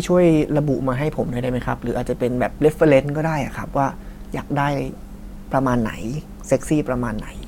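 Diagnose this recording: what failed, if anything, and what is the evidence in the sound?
Nothing in the signal chain failed: the speech signal stays continuous and steady, with no dropouts, clicks, level jumps or distortion anywhere in the recording.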